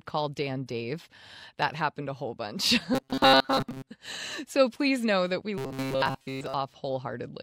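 From 2.94 to 3.90 s, after "happened a whole bunch", and again from 5.58 to 6.54 s, after "please know that we", the speech becomes a metallic 134 Hz buzz: robotic sound from repeated short buffers, likely about 7.5 ms of audio looped while most real input is skipped.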